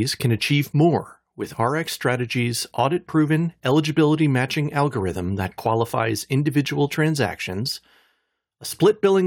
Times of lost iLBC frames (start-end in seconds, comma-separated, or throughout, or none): none